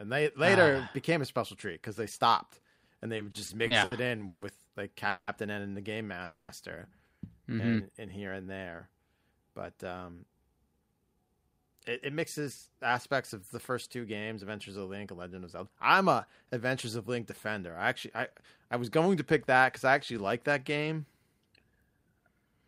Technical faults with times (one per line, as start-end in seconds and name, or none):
3.17-4.43 repeated stalls (stutter)
5.09-5.29 call audio freeze
6.24-6.50 call audio freeze
7.43-7.84 jitter buffer slow-down
9.50-12.90 jitter buffer speed-up
13.33-14.43 jitter buffer speed-up